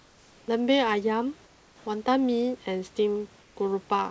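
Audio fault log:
0.00–0.48 s, 1.46–1.86 s and 3.40–3.56 s: comfort noise in place of the background. In each pause the room's background vanishes. A steady, featureless hiss replaces it, about 2 to 3 dB quieter and lacking the real noise's texture. The real background sits about 32 dB below the loud parts. The likely cause is discontinuous transmission: the sender stopped sending in silence, and the receiver synthesised noise roughly matched to the room. Like everything else, the fill stops at 8 kHz, the call codec's upper limit.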